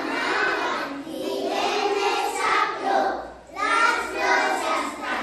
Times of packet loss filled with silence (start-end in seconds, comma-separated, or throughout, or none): none